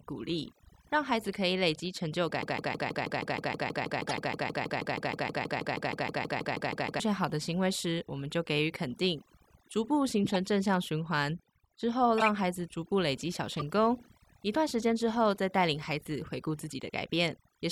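A noise reduction stage set far too aggressively runs through the whole recording. This is overdone noise removal. Any frequency band that comes close to the tool's noise estimate is pushed down hard or switched off, and the quieter parts of the speech are removed along with the noise. The background drops and is dotted with twinkling specks.

From 2.43 to 7.00 s the playback chain likely stalled and kept resending the last fragment it held. The result is a broken-record loop: a 159 ms slice repeats exactly, back to back, 29 times over about four and a half seconds. That gives a stuttering, machine-gun repetition at roughly six cycles per second. The speech that should have filled that stretch is gone entirely.

Damaged compressed frames were decoded as if they were valid, and the bad gains and misread codes scattered energy into the wrong frequencies. These corrupt frame decoded events fall at 4.08–4.15 s (inside the loop), 10.24–10.36 s, 12.18–12.28 s, 13.57–13.63 s and 15.37–15.39 s. 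Each lasts a few frames and is heard as a short chirp, squeak or burst of noise. Peaks reach about −15 to −25 dBFS, and the last one is much fainter, near −35 dBFS.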